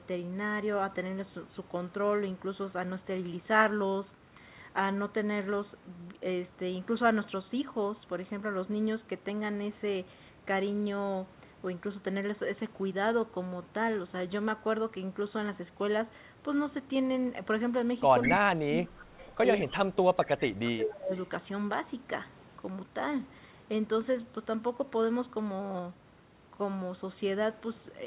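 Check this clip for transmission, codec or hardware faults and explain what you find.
Two call-related faults show up, clustered between about 18 and 21 s.

Echo leak at 18.22–18.4, 19.04–19.36, 19.59–19.76 and 21.15–21.19 s: a copy trailing about 0.2 s behind, fairly strong at first, then faint, likely from a far-end canceller missing loudspeaker pickup.

Speech suppressed in double talk at 18.26–19.07 and 19.69–21.12 s: the talker ducks by roughly 25–30 dB in patches, likely the canceller clamping down while both sides overlap.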